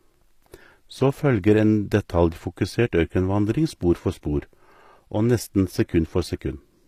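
All the way through, the treble on this speech has that rebuilt, gritty quality, with s sounds going metallic and lispy and nothing above 15 kHz. That's likely HE-AAC compression, faking the top end by copying lower bands upward, at a rate that fits about 24 kbps.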